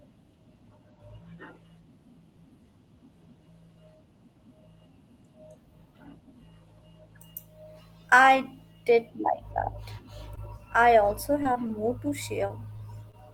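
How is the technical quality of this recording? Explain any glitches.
The speech carries seven brief glitches, all in the last three seconds, heard as tiny smears where the sound momentarily wobbles before carrying on. They fall at about 10.35, 11.43, 11.53, 11.67, 12.47, 12.77 and 13.11 s, each disturbance lasting roughly 35 to 40 ms.

These are short concealed packet losses. At each point about 20 ms of audio never arrived in time. The receiver papered over the gap by extending the preceding sound for around 14 to 22 ms, then faded back into the real signal, which leaves the brief smear.

The call path shows a top end that stops around 12 kHz, consistent with Opus at a moderate bitrate near 32 kbps.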